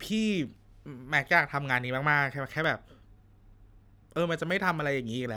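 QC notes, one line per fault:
0.46 s, 1.69 s, 2.64 s, 4.50 s: dropped samples. Each is a single sharp click with a thin vertical line across the spectrum. The likely cause is a tiny run of samples, well under a millisecond, missing from the stream, so the waveform jumps straight to a later value. Unlike a dropout, there is no audible gap and no sound goes missing. Unlike a codec glitch or crackle, each click is isolated and clean.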